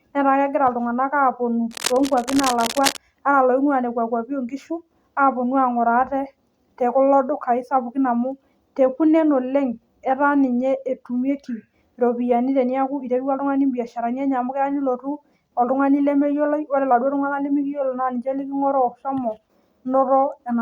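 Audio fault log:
1.71–2.97 s, cable scratch noise: a dense, irregular crackle and rustle sits over the speech for about 1.3 s, roughly 10 dB below the speech level. The bursts are uneven in spacing and strength rather than steady hiss, which points to contact resistance jumping about rapidly, likely from a worn cable or connector being moved. Each change in resistance modulates the signal path, so the noise tracks the handling.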